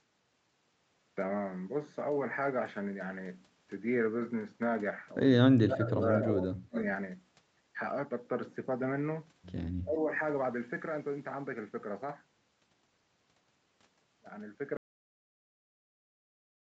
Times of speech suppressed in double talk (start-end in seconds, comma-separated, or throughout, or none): 5.55-6.37, 6.62-6.78, 9.85-10.11